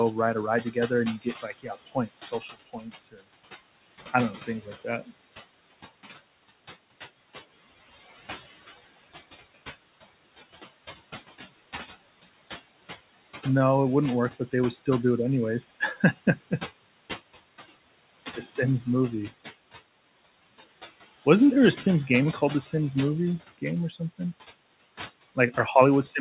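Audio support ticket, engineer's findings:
Noise suppressor artifacts, throughout: room noise, sitting about 13 dB under the speech, pumped down by about 17 dB between phrases and resurfacing beneath them. Suppressor gain riding frame by frame.

Speech cut by the noise suppressor at 0.62–0.91 s, after "ride a ride" and before "and you"; 1.18–3.23 s, after "and you"; 15.8–16.15 s, after "do it anyways". Drops of about 13 dB, reaching about 20 dB in the middle span, which loses roughly a second of speech. Suppressor misjudged soft speech as noise and attenuated it with the background. Audio stops at 4 kHz, which fits a G.711 64 kbps narrowband call path.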